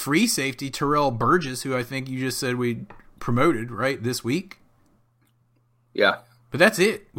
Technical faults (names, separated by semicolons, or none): none